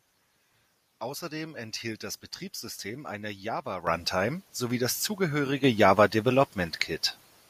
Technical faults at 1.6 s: none

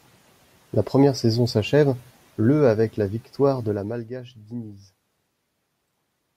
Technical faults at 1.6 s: none

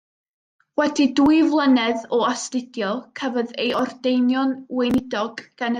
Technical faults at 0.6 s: none

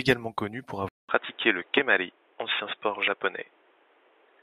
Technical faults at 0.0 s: none

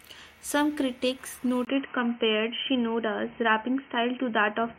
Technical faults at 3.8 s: input switched to a poorer device

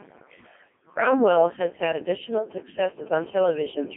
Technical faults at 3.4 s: Codec 2 vocoder; GSM phone buzz

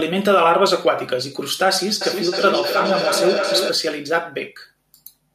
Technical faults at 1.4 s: none

